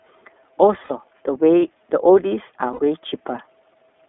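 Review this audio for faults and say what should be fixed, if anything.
The whole thing's been through the iLBC codec, and you can hear it: the speech sits in a narrow telephone band, roughly 250 Hz up to 3.5 kHz, with nothing bright above that, and it has a slightly rough, synthetic edge. iLBC codes each frame's excitation on its own, and the texture here fits its 13.33 kbps mode with 30 ms frames. To avoid this, capture or route the call through a wideband codec instead of iLBC.

There are also two spots of lost iLBC frames, one from 0.84 to 0.91 s and another from 2.73 to 2.79 s, each about 60 ms long, which fits two dropped 30 ms frames. In each gap the decoder fills in by repeating the last pitch cycle mixed with a bit of noise, so you get a short held, faintly buzzy vowel before the speech snaps straight back. To prevent this, cut packet loss on the network path or add jitter buffering and FEC.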